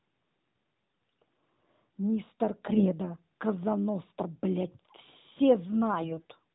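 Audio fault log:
2.66–2.94 s and 6.00–6.27 s, AMR bit errors: the speech turns hoarse and gargly for under a third of a second each time, roughly keeping its pitch and level. On a weak link, unprotected bits in the AMR-NB frames arrived flipped while the checksum on the key bits still passed, so the pulses driving the voice model landed wrongly and the fine pitch, gain and spectrum values drifted. The later burst is harsher, with an error rate near 10% against about 5%.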